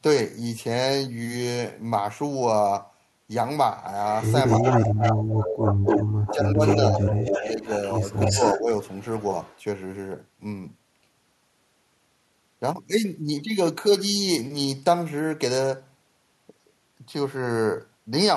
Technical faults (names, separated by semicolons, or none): echo leak; speech suppressed in double talk